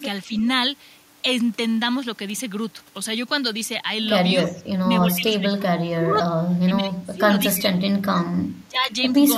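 Right at the start, around 0.27 to 0.32 s, the speech dips by about 5 dB for a brief moment. That's likely speech suppressed in double talk, with the canceller briefly unsure whether it was hearing its own talker or the far end. Straight after, from 0.37 to 0.47 s, there's a faint delayed copy of the voice trailing about 319 ms behind, sitting about 25 dB under the speech. That's likely an echo leak, where a loudspeaker's echo slipped past the canceller and came back down the line. From 4.47 s things get heavier. The voice sinks by about 15 dB through 4.86 s, then keeps ducking by as much as about 25 dB over 5.1 to 7.35 s, 7.55 to 8.27 s and 8.62 to 8.9 s, while the other side presumably talks over it. Each of those stretches is likely the same double-talk suppression, just much deeper.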